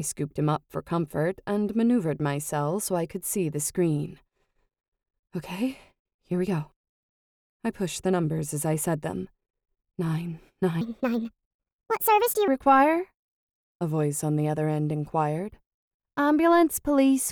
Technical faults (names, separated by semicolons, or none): section at the wrong speed